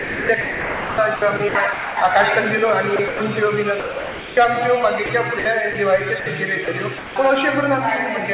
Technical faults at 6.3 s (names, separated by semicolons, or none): sound chopped by the voice detector